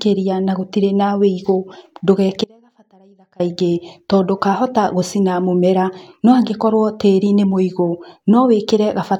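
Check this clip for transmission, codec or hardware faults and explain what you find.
There is one fault, an audio dropout to a faint residue, from 2.44 to 3.40 s. For just under a second the speech abruptly cuts away, then returns in mid-flow, with no fade at either edge. This is likely a break in the signal path before a stage that stayed live, so the gap is not silent. What remains is a faint trace of the sound, roughly 30 dB below its normal level, heard as a thin, distant leak rather than a natural pause.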